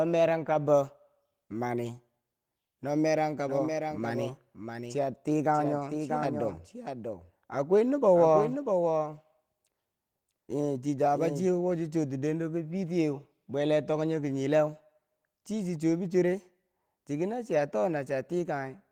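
At 0.45 to 0.55 s a lost packet rebuilt from error correction passes by with no gap. About 60 ms of speech, which fits three 20 ms packets, plays from the low-bitrate backup copy carried in the following packet. That stretch turns briefly rougher and noisier. Ordinary packet-loss concealment would instead smear or repeat the preceding sound. Here the actual speech content survives, only at reduced fidelity.

From 3.46 s to 11.48 s, starting just before "wochi chuwo ti dendo", a doubled audio track runs underneath. A second full-band copy of the speech trails roughly 0.7 s behind, about 5 dB quieter. It most likely comes from a slower second capture path. It starts and stops abruptly and has no decaying tail or room colour. That separates it from acoustic echo or reverb, which would fade and sound filtered.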